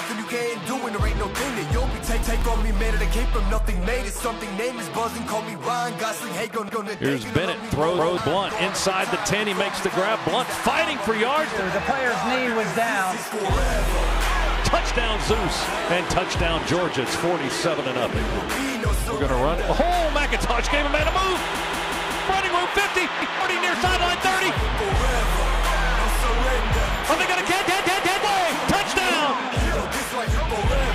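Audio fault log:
2.23–2.42 s, 6.69–6.87 s, 7.99–8.17 s, 21.55–22.29 s, 23.22–23.41 s, 27.68–28.24 s: repeated buffer. Late-arriving audio made the device replay the last 0.19 s piece (fitting an 8192-sample buffer) once, or four and three times at 21.55 and 27.68 s. This causes stutters with hard joins, seen as identical waveform blocks and repeating spectrogram patterns with vertical edges.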